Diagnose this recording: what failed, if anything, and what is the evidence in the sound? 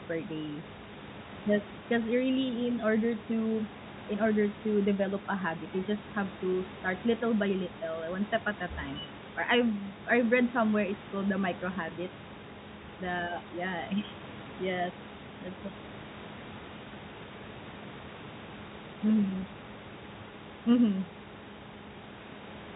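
Nothing has failed: the speech carries the narrow band expected of a G.711 A-law telephone path at 64 kbps, with the room's background noise sitting about 19 dB below it.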